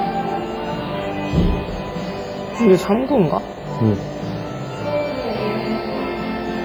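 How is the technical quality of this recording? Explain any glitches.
The technical quality is poor: heavy codec damage runs through the whole recording.

Throughout, the sound rings and smears, with a washy hiss that swells and fades with the signal. This is likely WMA compression. Its long transform blocks spread quantisation noise across tens of milliseconds, and weak spectral lines get zeroed, which fits a low bitrate around 24 kbps. On a spectrogram, the upper range looks patchy, with holes and blurred smearing around each sound onset.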